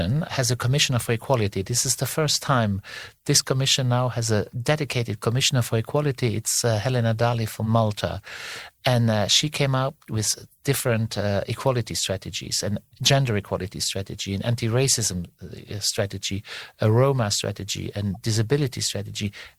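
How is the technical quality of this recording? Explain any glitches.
One glitch occurs near the end of the speech. A corrupt frame decoded at 18.15 s: flipped bits in a single compressed frame misplaced spectral energy, producing a faint, brief chirp, squeak, blip or burst of noise.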